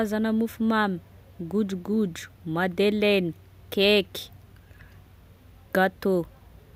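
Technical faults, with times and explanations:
No technical faults can be heard in this speech clip.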